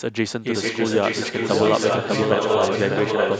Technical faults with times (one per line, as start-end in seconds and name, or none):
0.00-3.40 doubled audio track
0.52-3.40 echo leak